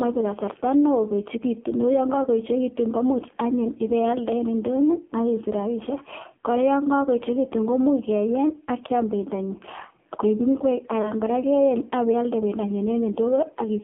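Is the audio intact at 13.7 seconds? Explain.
No. At 13.7 s the speech is still under AMR narrowband mobile codec damage, present throughout. At 5.9 kbps, everything above 3.4 kHz is gone and the voice sounds heavily buzzy and synthetic.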